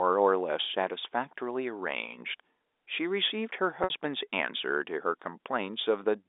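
At 3.84 s, about 60 ms of packets goes missing (a gap consistent with two packets), and the receiver covers it by repeating the last pitch period until 3.90 s. This packet loss with pitch repetition sounds like a brief held, buzzy tone in the speech, heard through the 300 to 3700 Hz G.711 telephone band.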